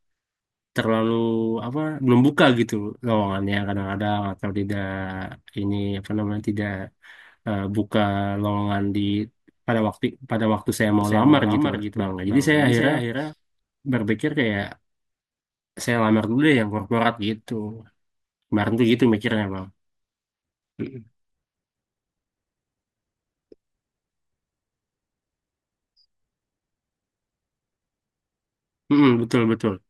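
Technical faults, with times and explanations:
11.01–13.33 s, doubled audio track: a second, full-band copy of the speech runs about 300 ms behind the original at roughly 5 dB lower, so every syllable is followed by a distinct, quieter repeat. The copy has no decay or room colouring, which separates it from a real echo, and it switches on and off abruptly at the edges of this span. The likely cause is the same signal reaching the mix twice through a slower second path.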